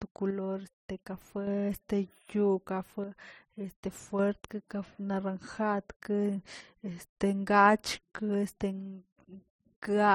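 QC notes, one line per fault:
0.31–1.47 s, 3.04–4.19 s and 6.61–7.11 s, one channel drops out: the speech falls abruptly by about 6 dB and returns just as suddenly at each boundary. The likely cause is one stereo channel going silent. In the mono sum, material shared by both channels loses half its contribution, which accounts for the 6 dB step, and anything carried only by the missing channel vanishes entirely for those stretches.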